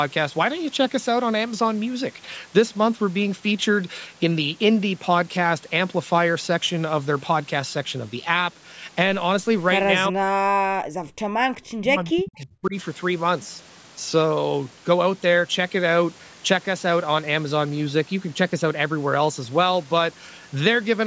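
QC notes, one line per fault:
10.09–10.98 s, speech suppressed in double talk: the talker's level collapses by around 40 dB for just under a second. Most likely the far end was talking at the same moment, and the echo canceller couldn't tell this voice from its own loudspeaker echo, so it pulled everything down.
11.26–11.36 s, background gated by the echo canceller: the room sound drops by about 40 dB for a tenth of a second, then snaps back. That's the canceller clamping the mic hard while the loudspeaker plays, then releasing.
11.64–12.75 s, speech suppressed in double talk: same drop as before, again dipping around 40 dB for roughly a second. It's likely the other side speaking over this talker, with the suppressor treating the overlap as echo and ducking the near voice.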